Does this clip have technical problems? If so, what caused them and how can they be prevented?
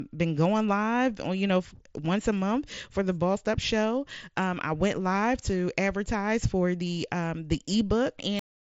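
Yes. There's concealed Bluetooth headset packet loss at 2.76 s, right after "know once a month", and at 6.88 s, after "live to advertise for". Each is a brief 15 ms patch where the phone copied a matching bit of recent waveform, which fits a couple of lost frames. Keeping the headset close to the phone, with a clear line between them, helps prevent this.

The clip also has a cut-off end at 8.39 s. The final buffers never got written, so the audio drops straight to digital silence mid-sound with no decay. Letting the recording run a second longer before stopping, and flushing buffers before closing the file, prevents it.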